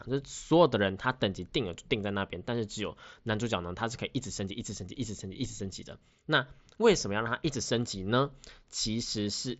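Nothing goes wrong anywhere in this speech clip, which just comes across the usual Bluetooth headset link, so the top end tops out around 7.7 kHz.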